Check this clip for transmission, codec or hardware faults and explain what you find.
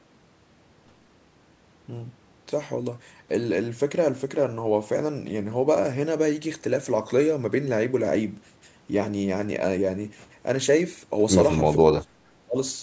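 One fault is audible, near the end of the speech. From 11.79 to 12.56 s the voice dips sharply, by about 30 dB. This is likely speech suppressed in double talk, where the echo canceller mistook the talker for echo while both sides spoke. The call microphone processing limits the audio to nothing above 8 kHz, which is expected rather than a fault.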